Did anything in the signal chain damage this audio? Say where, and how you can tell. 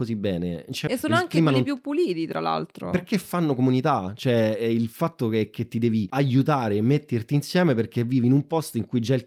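Yes. Both faults come from the network and jitter-buffer stage of a call. At 0.87 s, right after "bene non c'è", playback skips ahead: about a second of speech is missing, and the two sides are joined almost directly with nothing filled in. A packet-loss dropout would leave silence or concealment noise. Here the missing stretch simply vanishes, so the buffer discarded audio while later speech was already queued.

From 1.0 to 4.1 s the jitter buffer speeds up, running at about 109 percent. It removes short pitch-period pieces again and again until roughly a third of a second is gone, shrinking the backlog left by delayed packets. The speech sounds hurried but its pitch stays the same. A clock or sample-rate mismatch would raise the pitch along with the speed, so the unchanged pitch points to time-scale compression.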